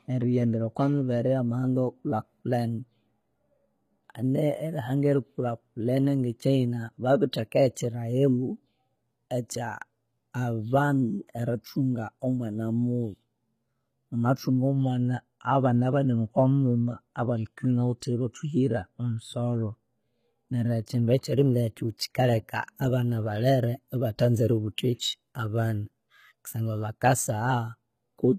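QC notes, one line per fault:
throughout, HE-AAC compression: The treble sounds bright but synthetic, with sibilants turning gritty and metallic or lispy, and nothing is audible above about 14.9 kHz. This is likely HE-AAC coding, where only the lower spectrum is truly encoded and the upper bands are rebuilt by copying lower content upward under a coarse envelope. The rebuilt harmonics don't line up with the real ones, and the degree of damage points to a low bitrate around 20 kbps.
11.27 and 20.86, pre-echo: Just before each of these onsets, including the one leading into "erithunga omwana" at 11.27, a brief hiss of about 16 to 19 ms creeps in, and the attack itself sounds softened and smeared. The transform codec spread quantisation noise across a whole block. When the sharp onset landed late in that block, noise sized for the loud attack leaked into the quiet moment ahead of it.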